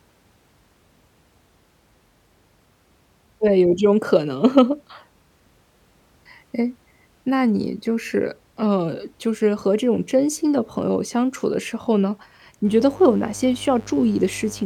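At 12.63 s a mains buzz comes in and stays right to the end of the clip. It's a steady, raspy buzz sitting roughly 25 dB under the speech, so it's quieter than the talker. It's built on a 50 Hz supply: something like a dimmer, a rectifier or an unshielded run is letting sharp switching spikes in twice every mains cycle, so the harmonics stretch up into the kilohertz range.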